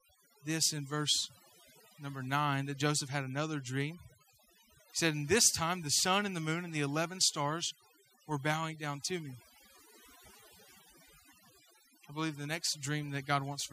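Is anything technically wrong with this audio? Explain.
Yes. Throughout the speech there is overdone noise removal: a reduction stage set far too aggressively mutes individual frequency bands sitting near its noise estimate, taking quiet vocal detail too. Unlike a noise gate's whole-signal pumping, the background becomes twinkling specks over near silence.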